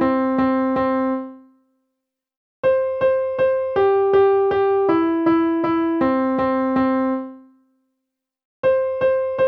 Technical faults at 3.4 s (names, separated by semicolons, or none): none